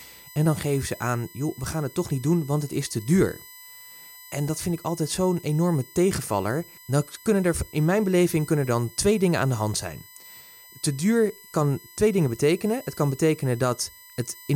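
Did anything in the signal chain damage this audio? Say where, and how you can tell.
Yes. USB whine runs throughout the speech: a steady, fixed-pitch 1 kHz tone whose harmonics peak around 12 kHz, roughly 25 dB below the voice. It enters in the analogue wiring, as the bus's 1 ms frame currents leak through shared power or ground.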